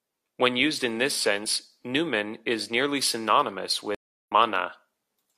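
Speech, with a stream reconnect after "numen is nearly synonymous": from 3.95 to 4.32 s the sound goes silent for 0.33 s, then resumes roughly a third of a second further on as a fresh decoder rejoins. Unlike a simple dropout, material is skipped, not just muted.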